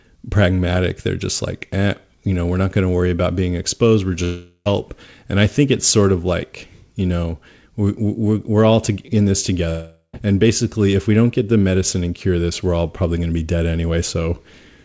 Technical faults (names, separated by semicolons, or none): long network dropout